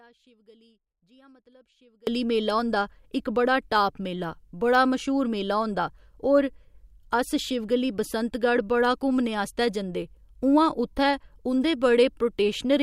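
A likely signal loss upstream, with the path left live, causes an audio dropout to a faint residue in this speech from the start until 2.07 s: only a faint leak about 30 dB down remains before the speech returns abruptly at "मेला होंदा".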